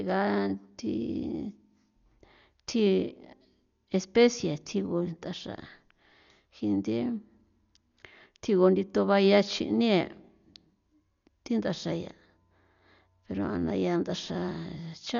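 Throughout the speech, heavy damage from likely Dolby Digital compression: nothing survives above 6.9 kHz, and many frequency lines were left without detail and filled with noise, which fits a bitrate near 48 kbps. The result sounds dull, with rough, fluttering noise around tones.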